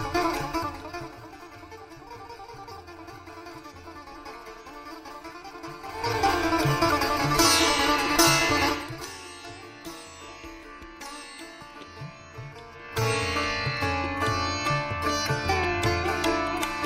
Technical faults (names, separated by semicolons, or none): zipper noise